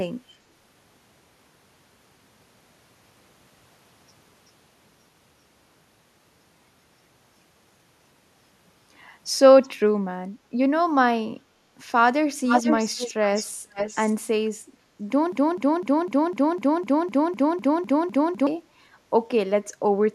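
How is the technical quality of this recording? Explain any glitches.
The recording has two clear problems: some echo leaking back in the middle, then a stuck loop near the end.

Echo leak shows up four times. At 9.62 to 9.69 s there's a faint delayed copy, well below the speech, about 382 ms late. Then from 12.46 to 13.14 s it comes back about as loud as the talker, followed by 13.33 to 13.5 s (noticeably quieter) and 13.73 to 14.16 s (nearly full level), all about 472 ms behind. That's likely a far-end loudspeaker whose echo canceller let its own mic pickup slip back into the call.

The broken-record loop runs from 15.32 to 18.47 s. A chunk of speech about 252 ms long repeats identically, back to back, twelve times, so it sounds like a skipping stutter. Whatever should have been said during those three seconds is gone. The likely cause is a player, encoder or stream that stalled and kept resending the last fragment it held.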